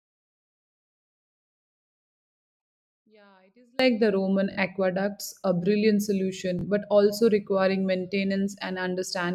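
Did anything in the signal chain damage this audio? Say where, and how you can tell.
Yes. From the start to 3.79 s the speech collapses by about 34 dB and only a faint copy remains, the sign of one channel inverted, likely from a reversed wire in the analogue stereo path. Summing to mono cancels everything common to both sides, so the centred speech largely disappears. On a waveform the mono sum shrinks to a sliver there. On a spectrogram the energy drops across the band until 3.79 s, when full level returns.

Two Bluetooth stutters come from the wireless link. One runs from 4.52 to 4.58 s, just before "aqueducts a brilliant". The other runs from 6.59 to 6.64 s, between "aqueducts a brilliant" and "but also requiring". Each replaces about 43 ms of sound, which fits two lost packets, with a short repeated slice that buzzes briefly before the speech resumes further on. On a waveform the identical repeated cycles are visible. 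On a spectrogram each shows as short vertical banding with a hard cut at each end.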